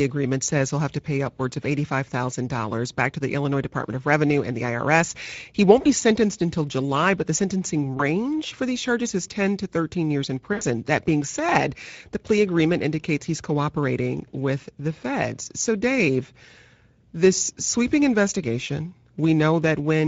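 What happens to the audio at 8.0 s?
Right at 7.97 to 8.02 s, between "but the sentencing" and "for these charges is", there's a brief dropout hidden by VoIP packet loss concealment in the speech codec. About 20 ms of audio went missing, which fits a single lost packet. The decoder covered the gap by extending its last pitch and filter while lowering the gain. You get a short stretched, fading patch, and the speech stays weak or distorted for a moment after the real signal returns.

Underneath that, the whole clip carries plainly audible Speex codec damage. The grainy, hoarse texture comes with a rate of around 16.8 kbps, where there aren't enough bits to code the excitation cleanly. Anything above 8 kHz is just a noise-like fill rather than real detail.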